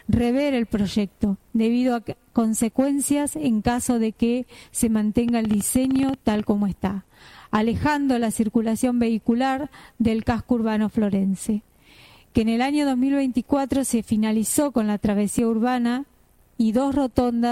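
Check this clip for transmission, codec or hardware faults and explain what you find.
One fault: a train of clicks from 5.29 to 6.41 s, about fifteen clicks at roughly 13.5 per second, irregularly spaced. The likely cause is interference or a faulty connection or power supply. They're heard as uneven ticking, show as thin vertical spikes on the waveform and broadband vertical lines on a spectrogram, and peak about 5 dB above the signal.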